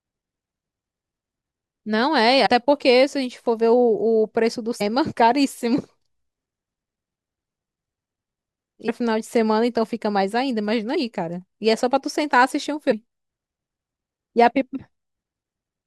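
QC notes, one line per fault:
2.45, 4.80, 8.87, 10.94 and 12.91 s, compressed frames skipped: at each point the speech jumps forward with no silent gap, losing roughly 70, 200, 300, 40 and 100 ms of material. The jumps come in steps that fit a 21.3 ms codec frame. Because overlapping frames are blended at the join, each jump is a short smeared blip, not a hard click. Content is missing, not silenced as in a dropout.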